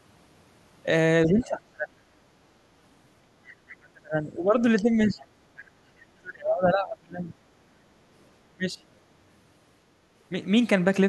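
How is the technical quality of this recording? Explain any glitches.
The quality is fairly rough: the talker keeps getting pushed down and two brief scraps of a second voice slip through, all typical of a call where both ends were talking over each other.

The main problem is speech suppressed in double talk, at 1.26–2.01 s, 3.8–4.62 s, 4.79–5.33 s, 5.81–5.87 s, 6.21–7.32 s and 8.52–8.81 s. The talker's voice sinks by about 20 to 30 dB, sometimes nearly vanishing, with the longest stretch around a second. The likely cause is the echo canceller hearing both people at once, failing to tell its own talker from the loudspeaker echo, and clamping down on everything.

There's also some of the other side's voice leaking through, in two very short bits at 3.69–3.76 s and 5.58–5.62 s. These are faint, about 25 dB under the main speech, and come across as fragments of a different voice. The likely cause is the far end's audio playing from the talker's loudspeaker and reaching the mic, with the canceller missing a bit of it.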